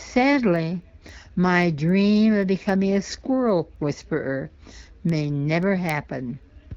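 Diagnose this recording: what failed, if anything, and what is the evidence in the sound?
The receiving converter on the digital link ran on its own clock instead of locking to the sender's, drifting by something like 70 ppm. Each slip drops or repeats one sample, giving word clock ticks roughly every third of a second from 0.29 s to 6.69 s, about thirty in all.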